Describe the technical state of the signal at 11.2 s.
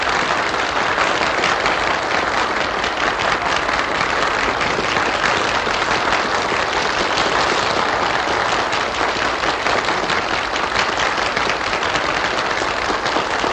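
At 11.2 s the audio is intact, with no dropout, distortion or other technical fault audible at that point.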